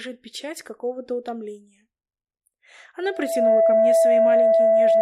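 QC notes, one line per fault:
3.02–5.01 s: loudspeaker feedback squeal. A 662 Hz tone swells over roughly 0.4 s to about 15 dB above the sound. Its build-up, rather than a steady onset, marks a runaway mic-speaker loop.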